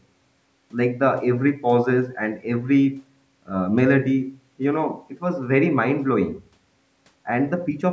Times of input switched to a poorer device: none

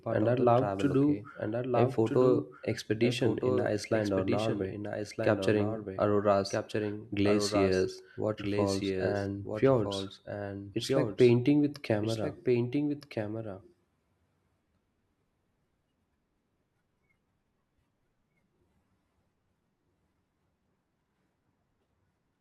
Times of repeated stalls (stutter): none

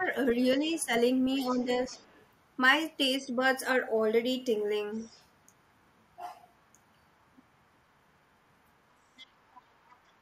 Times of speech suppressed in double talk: 0.00-0.08, 0.59-0.91, 1.40-1.93

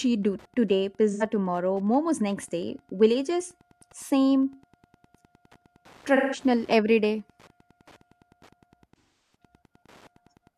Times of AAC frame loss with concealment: 1.11-1.23, 6.15-6.39, 8.98-9.35

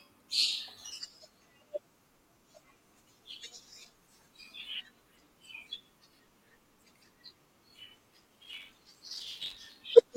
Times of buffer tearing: 8.14-9.85

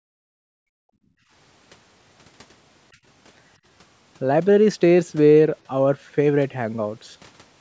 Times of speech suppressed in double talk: 0.00-0.83

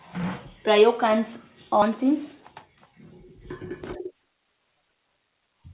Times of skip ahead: 1.82-1.84

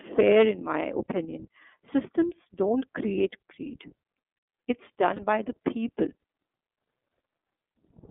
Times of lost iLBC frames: 5.15-5.20

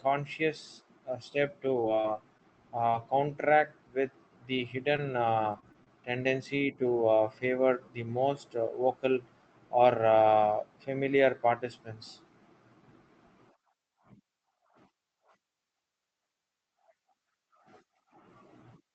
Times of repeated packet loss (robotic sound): 1.81-2.41, 5.52-5.88

